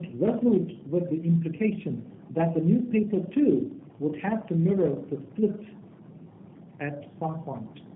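Tandem speech coding throughout: three low-rate codecs in a row each re-encode the last one's output, leaving rough, muffled, warbly speech with nothing above 3.8 kHz.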